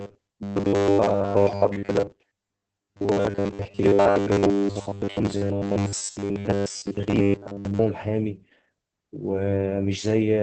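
From start to end the speech carries Opus voice compression, with plainly audible damage. Nothing sounds above about 8.4 kHz, a wideband cut, and the voice comes out muffled, hoarse and faintly robotic because the linear-prediction SILK coder is rendering the excitation coarsely, which fits a bitrate near 12 kbps. Unlike a simple low-pass filter, the roughness sits inside the voice itself, and unlike MP3-style damage there is no swirly, watery high end.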